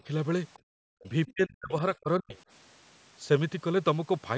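From 0.53 to 0.59 s, the other side's voice is likely leaking through an incompletely cancelled loudspeaker echo, a faint scrap roughly 30 dB below the speech. From 0.59 to 0.74 s, the echo canceller clamps the microphone, gating the background: the room sound drops by about 40 dB for roughly 150 ms, then returns. Speech is suppressed in double talk, likely because the canceller mistook the talker for loudspeaker echo while both sides spoke. It dips about 15 dB from 1.02 to 1.08 s, then from 1.26 to 2.36 s it cuts out in pieces, falling by as much as 40 dB over roughly 700 ms.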